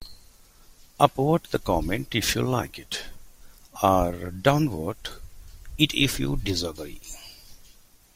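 Nothing in this speech recording points to a technical fault: the signal holds steady throughout, with no interruptions, level jumps or audible damage at any point.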